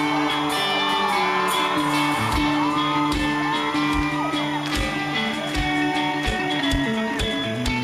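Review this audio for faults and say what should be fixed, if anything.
Timecode bleed runs through the whole clip: a steady chirping warble sits roughly 20 dB below the main sound. Linear timecode is a square-wave signal that flips between two pitches, here around 1 kHz and 2 kHz, and its 25-frames-per-second rhythm gives the chirp its regular texture. It has leaked from a nearby track, cable or connector into the audio path. Keep timecode on physically separated, shielded cabling and a dedicated track, well away from audio inputs.

A time-stretched section starts at 6.1 s and runs to the end. The pace jumps abruptly to about 1.71 times the earlier rate while the pitch stays put, so the passage sounds rushed. This is likely the work of software that squeezed the audio to fit a set length, holding pitch by dropping short slices of sound. Leave enough room in the edit for the material's natural length rather than compressing it to fit.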